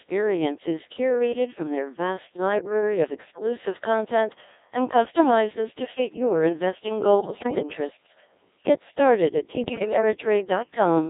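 Throughout, the speech has the robotic, buzzy sound of a Codec 2 vocoder at a rate that fits about 1.6 kbit/s, confined to 300 Hz to 3.7 kHz. The voice is rebuilt from sine waves rather than the original waveform, so the synthetic tone stays constant rather than coming and going. At 7.20 to 7.63 s, after "to fit your investing", and at 9.64 to 10.02 s, after "started at", bit errors on digital voice radio corrupt frame parameters. Pitch, level and tone lurch into warbling bleeps, unlike packet loss, which would leave gaps or repeats rather than garbled synthesis.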